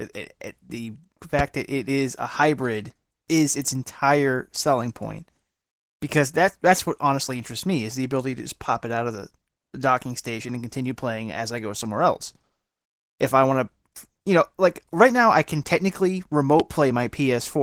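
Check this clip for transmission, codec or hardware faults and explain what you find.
Two faults are audible: Opus voice compression across the whole clip, and two loud pops.

The Opus voice compression runs from start to end. The speech has the muffled, slightly hoarse and robotic quality of a low-rate hybrid coder, which fits roughly 16 kbps. In hybrid mode, linear-prediction coding handles the band below 8 kHz and a transform layer fills in the band above it. At this rate both layers have too few bits, so the excitation is coarse. On a spectrogram, the upper band looks thin and patchy, and the harmonic detail below it is smeared.

The loud pops occur at 1.39 to 1.42 s, between "it it the" and "that it is a", and at 16.60 to 16.63 s, just after "now I can technically". Each is a single sharp click, well above the speech level, and the speech continues underneath it. They were likely caused by a voltage step from a connector, switch or driver glitch that was added to the signal. 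On a waveform, each shows as a tall, narrow spike. On a spectrogram, each is a thin vertical line spanning all frequencies.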